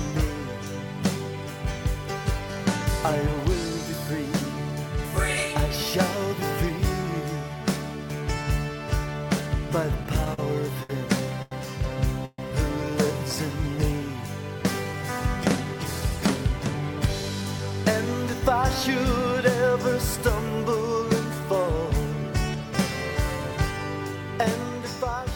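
From 10.03 to 10.39 s there are repeated stalls, a stutter. Packets arrived late, so the jitter buffer kept running dry. The receiver extended the last sound four times, about 78 ms in all. The longest gap is 44 ms. About a fifth of that stretch is filler, so the sound drags and catches.

Two short stalls from a late packet follow, at 10.83 s and 11.42 s. Each time a packet missed its slot. The receiver held the previous sound until it came: 61 ms, then 90 ms. Nothing is lost, but a sound hangs on too long, with a faint buzz or dip.

At 12.25 s a call audio freeze lasts until 12.39 s. The sound is drawn out as a fading buzz or hiss for about 130 ms. The last 20 ms fall to silence. Then the audio resumes where it stopped. Packets were likely held up in transit, emptying the buffer.

From 15.66 to 17.83 s comes a jitter buffer speed-up. Too much audio had built up in the buffer. The receiver trimmed tiny pitch-period slices, around a tenth of a second in total. 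Playback runs about 4% fast at the same pitch.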